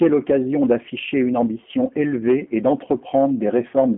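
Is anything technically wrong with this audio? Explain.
Yes. Throughout, the speech carries G.729 codec damage: rebuilt from a vocal-tract filter and sparse pulses, it sounds rough and synthetic, fitting 8 kbit/s. A spectrogram shows an empty band above about 3.8 kHz and thin energy below 200 Hz.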